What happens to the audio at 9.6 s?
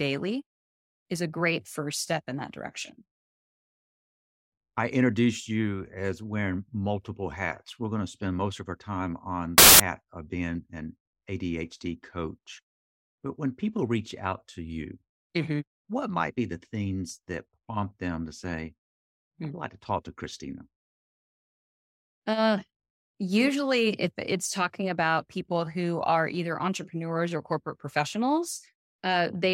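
At 9.58 s the reader starts assembling each sample from the wrong bytes, through a byte offset, swapped byte order or a misjudged alignment, and it stays that way until 9.80 s. The rapidly fluctuating low-order bits end up as the dominant part of every value, so for roughly a fifth of a second the speech is replaced by loud, harsh broadband noise.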